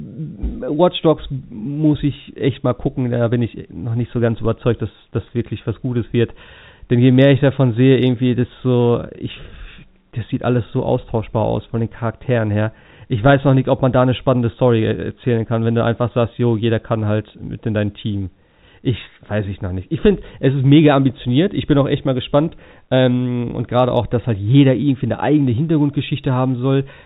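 No faults can be heard in the speech, which carries the narrow telephone band of G.711 coding with nothing above 4 kHz, consistent with a 64 kbps A-law line, and only the faint level-following grain that format always leaves.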